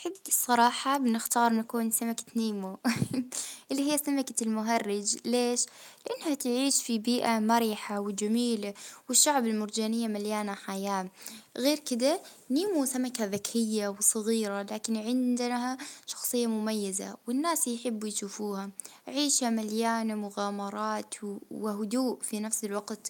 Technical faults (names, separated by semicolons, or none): echo leak